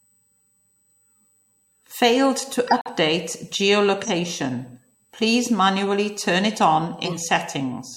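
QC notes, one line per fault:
Throughout: USB whine, a steady fixed-pitch tone at 8 kHz sitting about 40 dB below the speech. The bus's 125-microsecond microframe activity draws current in pulses that leak into the audio path through shared power or ground, so the pitch never drifts with the content.
2.67–2.90 s: corrupt frame muted. Speech drops abruptly into silence for about 0.23 s, consistent with four consecutive compressed frames failing the decoder's checks. The player filled those frames with silence rather than play damaged data, so the gap has hard edges and timing after it stays intact.
4.03–4.10 s and 7.04–7.19 s: corrupt frame decoded. Flipped bits made the decoder misread gains and spectral codes, placing energy at wrong frequencies for about one frame, then a few frames, peaking near -15 dBFS and -10 dBFS respectively.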